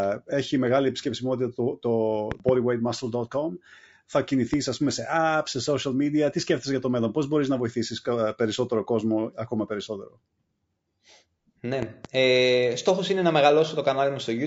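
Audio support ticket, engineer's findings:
Low-delay AAC compression, whole clip: rough, grainy speech, noise filling gaps between harmonics, synthetic-sounding top band. Likely AAC-ELD short frames smearing pitch detail; damage level fits roughly 32 kbps. Steady throughout, unlike intermittent network or packet-loss artefacts.

Loud pop, 2.32–2.51 s (double), 4.54–4.56 s (single, just before "ας πούμε"), 11.83–12.07 s (double); peaks about 15 dB, then about 10 dB above signal. Likely voltage transient from plug, switch or static. Speech continues underneath, so not a dropout.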